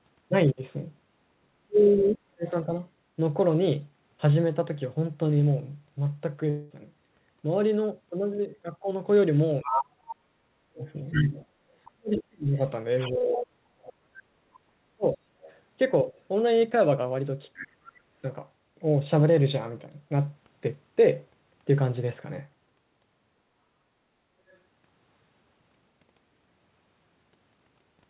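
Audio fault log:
1.37–2.69 s, 9.63–16.12 s, 17.60–18.23 s: speech suppressed in double talk. While the far end is talking, the near voice sinks by around 40 dB in places, and up to about three seconds are hit in the long middle stretch. It's likely the echo canceller couldn't tell this talker from loudspeaker echo and ducked everything.
6.50–6.72 s: long network dropout. About 200 ms of audio never arrived. Instead of silence, the gap is filled with a smeared continuation of the last sound, a buzzy tail that fades until the audio picks up again further on. The concealment is likely covering a lost stretch of packets.
9.62–9.84 s, 10.80–13.38 s, 15.05–16.21 s, 17.56–17.68 s, 24.48–24.57 s: other side's voice leaking through. A second voice comes through, as loud as the talker in the first short burst, then much quieter, and by 24.5 s it's barely there. This is likely leftover loudspeaker echo that the canceller didn't fully remove from the mic.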